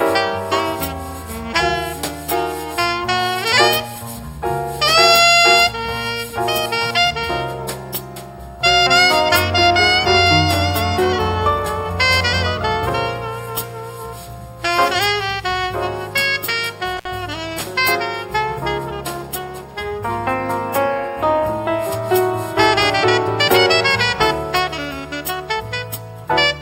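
At 16.97 s an intermittent contact briefly opens the signal path for about 58 ms, so the sound drops out with crackle at each edge and faint hiss between.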